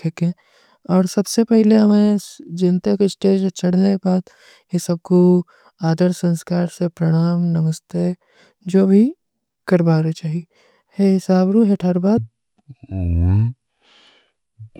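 A section at the wrong speed runs from 12.18 s to the end of this speech clip at 14.79 s, where playback drops to about half speed, so the audio turns slow and deep, falling roughly ten semitones, likely from that stretch being played against the wrong clock.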